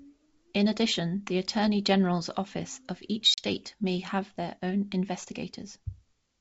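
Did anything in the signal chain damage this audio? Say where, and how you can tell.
Yes. Packet loss on the ADPCM call, a network fault: a hard-edged silent hole from 3.34 to 3.43 s, after "office of each" and before "may have their own", with about 40 ms lost, which fits roughly two packets. Unlike a plain dropout, the decoder's predictor and step size lose step with the sender's, so the G.722 sound resumes briefly mismatched before settling.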